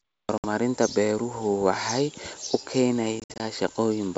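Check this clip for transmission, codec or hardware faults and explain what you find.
Two bursts of packet loss on an ADPCM call break up this speech clip. The G.722 wideband coding itself sounds clean, clear up to about 7 kHz and with at most a faint upper-band hiss.

From 0.38 to 0.46 s, just before "beeruhu waxay", about 60 ms of audio drops to silence, which fits a few lost packets. From 3.20 to 3.41 s, 120 ms goes missing in scattered gaps across 200 ms, the longest 60 ms. Each hole cuts in hard. Because the receiver's adaptive predictor and step size lose sync with the sender's, speech resumes with brief, slight distortion before settling.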